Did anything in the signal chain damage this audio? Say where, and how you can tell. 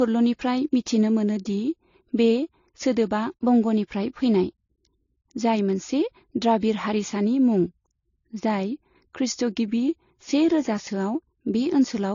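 Yes. Transcoding between lossy codecs runs throughout the speech, at the codec stage. The sound has no content above 7.1 kHz, and two different artefact textures are heard at once, one from each codec. That points to an MP3 near 45 kbit/s that was likely re-encoded to AAC-LC near 43 kbit/s, where the second encoder spent its scarce bits on the first one's damage and kept its low cut-off.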